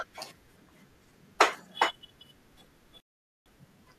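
At 3.00 s the speech drops to silence and does not resume until 3.46 s, a digital broadcast dropout. The receiver stopped getting valid frames and muted its output, so roughly 0.46 s of the transmission is simply missing rather than degraded.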